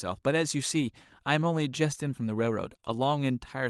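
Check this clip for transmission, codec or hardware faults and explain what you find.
Two kinds of packet-loss fault appear, both clustered in one burst near 2.7 to 2.9 s, with one earlier event. They ride on an Opus call path coding at 40 kbps, whose top end stops around 12 kHz.

Lost packet rebuilt from error correction occurs at 0.81 to 0.83 s, 2.73 to 2.75 s and 2.84 to 2.94 s. The last spans 60 ms, which fits three lost packets. The next packet carried a low-bitrate backup copy. The decoder played it, so there is no gap. Those stretches sound rougher and noisier.

Short concealed packet loss occurs at 2.69 to 2.73 s, 2.77 to 2.80 s and 2.80 to 2.84 s. Each time about 20 ms never arrived. The receiver extended the preceding sound for 12 to 19 ms, then blended back. This is heard as a brief smear or wobble.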